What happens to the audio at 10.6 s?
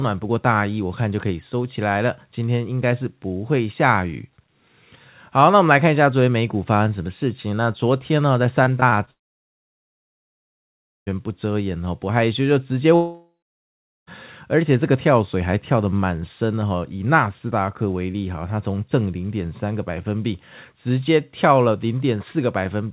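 At 10.6 s the sound is silent, inside a gap from 9.11 to 11.08 s. A brief fading continuation of the last sound gives way to silence, and nearly 2 s of audio is lost. A long network dropout is the likely cause.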